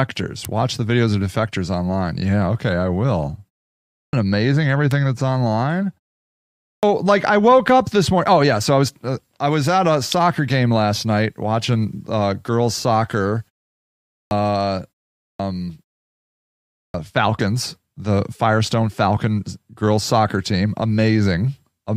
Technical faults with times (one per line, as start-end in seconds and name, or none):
0.45 electrical switching spike
3.89-4.13 clipped start after a pause
4.91 electrical switching spike
6.59-6.83 clipped start after a pause
10.12 electrical switching spike
14.09-14.31 clipped start after a pause
15.16-15.39 clipped start after a pause
16.71-16.94 clipped start after a pause